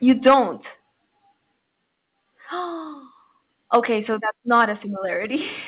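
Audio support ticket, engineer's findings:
Microphone overload, 0.08–0.35 s: harsh crackle on loudest speech peaks, roughly 7% of samples flat-topped, about 6 dB over full scale. Likely mic input gain set too high, converter clipping. Again at 3.74–3.78 s, about 5 dB over, similar clipped share. Again at 4.52–4.64 s, milder, about 3 dB over, only a small fraction clipped.

Microphone volume stepped down, 0.28 s: abrupt level drop of about 3 dB in voice and background. Likely call software's gain control cutting device input volume in one step. Repeats at 4.14 s (about 3 dB) and 5.16 s (about 2 dB), each following an overload. Whole clip band-limited to 4 kHz on the call path, which fits G.711 mu-law at 64 kbps.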